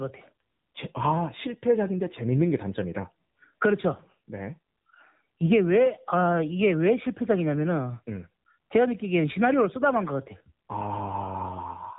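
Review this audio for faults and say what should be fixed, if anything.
The speech has been carried through an AMR narrowband mobile codec, which throws away everything above 3.8 kHz and rebuilds each 20 ms frame from a simple vocal-tract filter excited by a few pulses. Throughout the clip this leaves the speech dull and boxed-in, with a plainly audible buzzy, synthetic edge that fits one of the lower AMR-NB modes, around 7.4 kbps. To prevent it, capture or route the audio through a wideband path, or at least a higher bitrate, instead of a narrowband mobile link.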